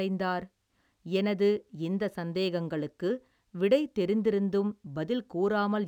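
Throughout the speech there is imaging from linear upsampling, consistent with a 22 kHz rate doubled to 44.1 kHz by straight-line interpolation. The top of the band is dulled, and a faint mirrored copy, roughly 40 dB down, sits between 11 and 22 kHz, adding a light metallic shimmer to sibilants.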